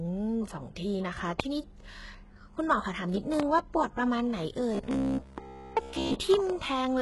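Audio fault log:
throughout, HE-AAC compression: nothing above 11.5 kHz, and the rebuilt treble sounds gritty and metallic on s sounds, likely from heavy spectral band replication at a very low bitrate, around 12 kbps.
1.40–1.42 s and 3.40–3.42 s, loud pop: a single sharp pop each time, about 20 dB above the speech, likely from an electrical step or pulse added to the signal.
4.75–6.16 s, robotic sound from repeated short buffers: the speech turns into a rigid buzz at 66.7 Hz, likely from about 15 ms of audio being repeated, with most of the real audio skipped.
6.34–6.52 s, loud pop: two pops in quick succession, about 15 dB above the speech, likely from voltage pulses added to the signal.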